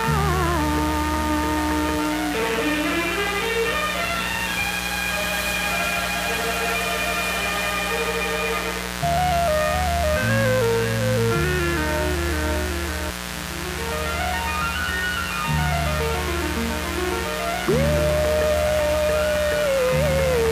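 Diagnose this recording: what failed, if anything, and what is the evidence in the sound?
The analogue wiring let mains interference in, most likely through a dimmer, rectifier or broken shield. The result is mains buzz throughout: a steady, raspy buzz with 60 Hz harmonics reaching into the kilohertz range, loud at roughly 10 dB below the wanted sound.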